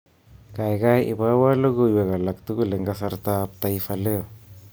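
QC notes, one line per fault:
3.09–4.72 s, pre-emphasis left on: from "ibowo logoiwek alatugul eng" onward, treble sits about 11 dB high at 10 kHz; an uncorrected boost fitting a 50 µs FM curve sounds thin and sibilant.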